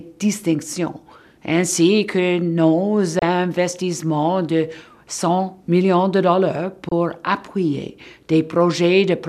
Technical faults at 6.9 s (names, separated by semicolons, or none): digital broadcast dropout